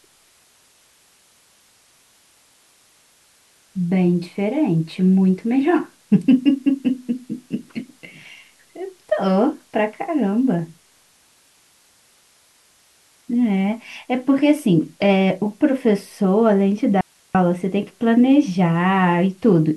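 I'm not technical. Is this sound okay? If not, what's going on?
No, there's an audio dropout to a faint residue: from 17.01 to 17.35 s the speech suddenly vanishes, leaving only quiet hiss, likely a brief signal loss while the line stayed open.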